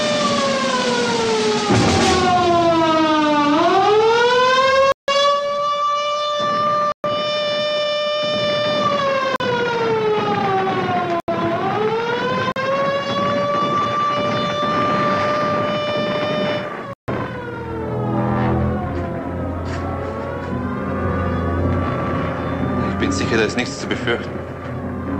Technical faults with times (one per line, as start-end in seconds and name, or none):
4.92-5.08 block of digital silence
6.92-7.04 block of digital silence
9.36-9.40 block of digital silence
11.20-11.28 block of digital silence
12.52-12.56 block of digital silence
16.93-17.08 block of digital silence